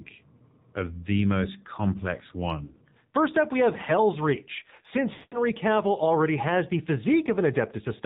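Throughout, the speech has passed through the AMR narrowband mobile codec, AMR-NB, at a low rate that sounds like about 7.4 kbps. The codec samples at 8 kHz and rebuilds the speech from a vocal tract model excited by a few pulses per 5 ms subframe, so nothing above 4 kHz survives. The speech sounds boxed-in and telephone-thin, and the coding damage is plainly audible as a buzzy, synthetic edge.

From 2.64 to 2.74 s, just after "of the most complex", there are lost AMR speech frames. About 60 ms failed to arrive intact, which fits three 20 ms frames. The decoder filled the gap by repeating the last good pitch and vocal tract settings at falling gain, so the sound briefly smears and dips. From 5.14 to 5.44 s a longer run of about 180 ms, which fits nine frames, is concealed the same way. Here the held sound stretches out and fades to silence before the speech resumes.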